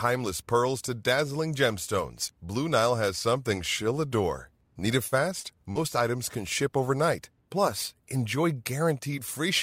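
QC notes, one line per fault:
5.07–5.15 s, 5.40–5.46 s, 5.71–5.78 s: short concealed packet loss. About 40 ms of the stream was lost each time. The decoder extrapolated the preceding sound, so each gap is heard as a brief smear or wobble.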